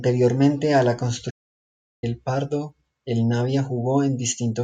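A speech recording with a playback stall: the player most likely ran short of data or had its output thread blocked, so it went silent right after "a la", from 1.30 s to 2.04 s. That cuts the speech off mid-flow for about 0.72 s before sound returns.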